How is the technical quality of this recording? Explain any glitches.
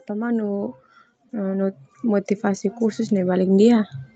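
The main glitch here is automatic gain rising, running from about 0.07 s to 3.94 s. The gain control judged the input too quiet and kept pushing its level up, about 12 dB in all, so the speech and the background swell together. The top end stops around 8 kHz, which fits a call codec path.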